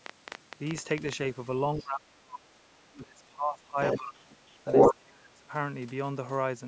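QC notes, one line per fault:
0.06–1.14 s, train of clicks: about ten irregular clicks, roughly 10.4 per second, peaking about 15 dB above the sound, likely from interference. They show as thin vertical broadband lines on a spectrogram.
1.76–2.69 s, 2.94–3.78 s, 3.98–4.41 s, 4.95–5.51 s, speech suppressed in double talk: the speech dips or breaks up in pieces, by about 30 dB in the first and last runs and about 15 dB in the middle two. The likely cause is the echo canceller ducking the talker while both sides spoke. The waveform envelope collapses in chunks.
1.81–1.85 s, 3.82–3.99 s, 4.53–4.95 s, other side's voice leaking through: a second voice appears, about 25 dB below the speech, then level with it, then about 10 dB above. This is likely loudspeaker echo the canceller failed to remove. It shows as a separate harmonic pattern overlaid on the spectrogram.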